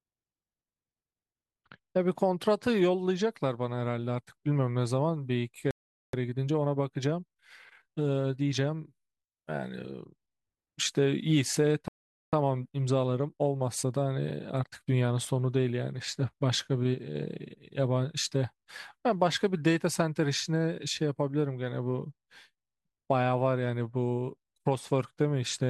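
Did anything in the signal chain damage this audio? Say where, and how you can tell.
Yes, at the playback stage. The speech drops to silence in mid-flow from 5.71 to 6.13 s, about 425 ms, and again from 11.88 to 12.33 s, about 447 ms. Each time it then carries on. These are playback stalls. The player likely ran out of buffered data or had its output thread blocked, so nothing was sent to the converter until audio was available again.

Straight after each gap, from 6.13 to 9.13 s and from 12.33 to 15.33 s, the speech sounds hurried, running at 1.1 times normal speed with its pitch unchanged. This is time-compressed catch-up. To clear the backlog left by the stall, the player cuts out short slices and cross-fades the joins. That raises the tempo without shifting pitch.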